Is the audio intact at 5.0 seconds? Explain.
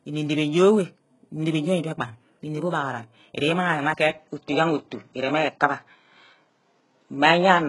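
No. At 5.0 s two faults overlap. Throughout the clip there is what sounds like HE-AAC compression. Nothing reaches above 11.4 kHz, and the treble sounds rebuilt rather than captured: copied upward from lower bands under a coarse envelope, so the s sounds turn gritty and lispy. The heavy damage points to a very low bitrate, around 12 kbps. Unlike a plain low-pass, the top end stays bright but is synthetic.

From 4.1 s to the end, the input likely switched to a poorer device. The band narrows to nothing above 7.6 kHz, the level shifts by roughly 5 dB, and a new noise floor appears far below the speech. There is no gap at the switch. Because this is a sudden, lasting change of tone, level and noise, it is a different device and not a gradual filter or codec change.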